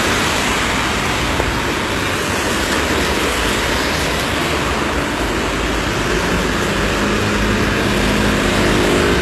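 HE-AAC compression, likely, runs throughout: treble above 12.3 kHz is absent, and upper bands copied from lower ones sound gritty and metallic, fitting roughly 16 kbps.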